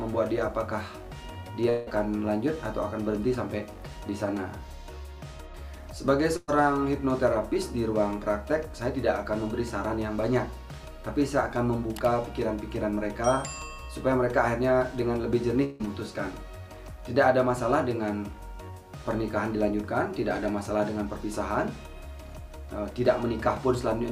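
At 1.69 to 1.89 s, and again at 15.64 to 15.82 s, the sound breaks off and the last instant is stretched into a fading buzz or hiss lasting about 170 ms and 160 ms. These are likely long network dropouts where the stream stopped arriving. Each one never decays to silence, and the audio picks up further on with roughly 180 ms and 160 ms missing.

At 6.36 to 6.50 s, a burst of packet loss removes about 120 ms. A shorter, roughly 110 ms concealment tail holds the preceding sound and fades it. It is briefer than the dropouts, and the skip forward is slightly smaller.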